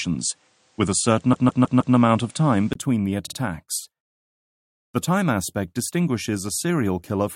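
From the start to 2.75 s the audio is dull and boxy, with nothing above 9.8 kHz. The likely cause is an input switched to a poorer device. A spectrogram shows a hard ceiling there, a 20 ms gap at the switch, then full bandwidth returning about 5 dB apart in level, with the earlier noise floor sitting roughly 35 dB below the signal. Repeated frames cause two stutters. From 1.32 to 1.95 s, a 156.7 ms block plays four extra times, adding 626.9 ms. At 3.25 to 3.36 s, a 52.2 ms block plays twice more, adding 104.5 ms. On a waveform these show as identical copies placed end to end.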